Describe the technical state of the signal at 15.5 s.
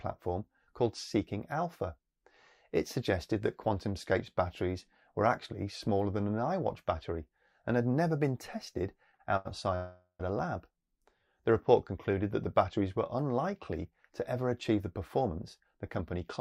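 At 15.5 s the signal sits inside a jitter buffer speed-up running from 15.21 to 16.21 s. The receiver drained excess buffered audio by cutting pitch-period-sized pieces, about 70 ms in total, so the sound plays roughly 7% faster at unchanged pitch. A spectrogram shows slightly compressed timing with harmonics at normal height.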